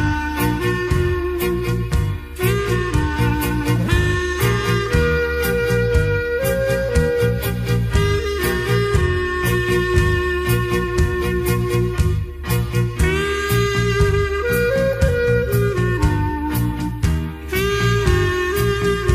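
Nothing stood out as a technical problem on listening.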